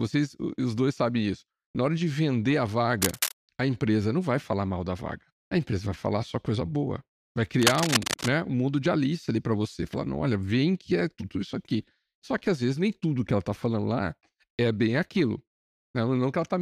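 At 3.02 to 3.34 s, and again from 7.59 to 8.31 s, there's cable scratch noise: dense, ragged rustling, a bit below the speech the first time and roughly as loud the second. It's likely a worn cable or connector being moved.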